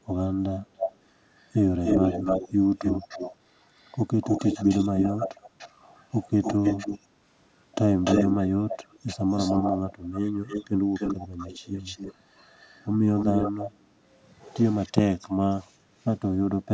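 Echo leak occurs at 0.77–0.96, 1.37–3.36, 3.75–7.0, 8.04–13.71 and 14.71–14.92 s. A copy of the speech returns 294 ms late. It is slightly quieter, nearly as loud from 1.37 to 3.36 s, and very faint at the end. Likely an echo canceller missed loudspeaker pickup.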